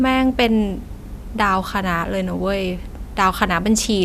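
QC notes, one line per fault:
No fault is heard anywhere in this speech clip. Nothing here calls for a QC entry.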